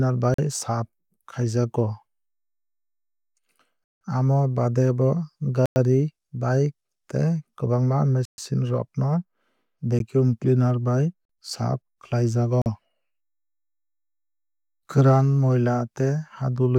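Blocks of digital silence at 0.34–0.38, 3.84–4.01, 5.66–5.76, 8.25–8.38, 9.99, 11.25–11.29 (before "saaf khlaijago") and 12.62–12.66 s (after "saaf khlaijago"). The output buffer likely went unfilled and the sound dropped to silence without fading. The gaps run from a 12 ms tick to holes of 103, 128 and 171 ms. The recurring 43 ms gaps fit 2048-sample blocks, and the longest fits 8192 samples.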